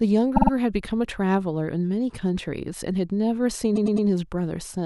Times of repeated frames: 0.35-0.51, 3.75-4.06

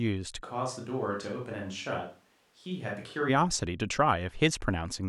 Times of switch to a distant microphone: 0.45-3.27

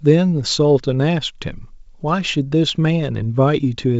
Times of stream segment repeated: none

